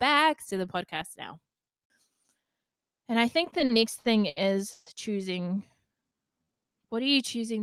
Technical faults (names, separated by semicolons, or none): repeated stalls (stutter); jitter buffer slow-down